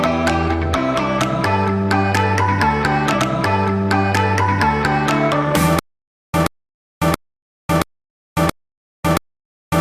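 At 3.13 s there's a stream segment repeated: the player queued the same chunk twice, so the two seconds up to 5.13 s play again. You'll hear a small blip where it jumps back, and the whole thing runs 2 s longer than it should.

From 5.79 s to the end you get a stutter with silent gaps. A 128 ms burst comes back six times, each followed by about 549 ms of dead digital silence, so it repeats every 676 ms. That's likely the stream stalling and replaying its last fragment on each retry, and whatever should have played there is gone.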